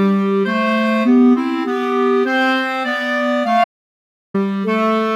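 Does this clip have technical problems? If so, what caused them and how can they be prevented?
Yes. An audio dropout to silence runs from 3.64 to 4.34 s, about 0.7 s of silence with no room tone. The sound stops mid-flow and resumes abruptly. The likely cause is a lost input, such as a loose connection or brief mute. Secure cables and monitor input levels while recording.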